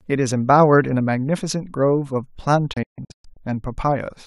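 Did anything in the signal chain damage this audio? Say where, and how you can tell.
Yes: a digital broadcast dropout at the receiver. From 2.73 to 3.37 s the speech mutes in several short holes with 8 ms fades, totalling 360 ms of lost material. The clean mutes and lost content, rather than glitchy repeats, point to failed frames being silenced.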